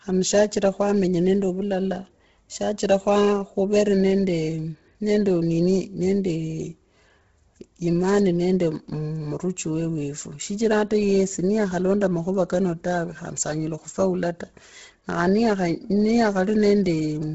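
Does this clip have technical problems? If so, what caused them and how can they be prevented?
Yes. The speech was likely passed through Bluetooth LC3 compression at a very low bitrate, consistent with about 16 kbps and 10 ms frames, for the whole clip. With so few bits, the codec discards most of the upper spectrum and patches the gaps with synthetic noise. Nothing remains above 7.7 kHz, and the heavy coding damage gives the voice a breathy, grainy edge. To prevent it, use a higher-bitrate LC3 setting or a wired or lossless capture path.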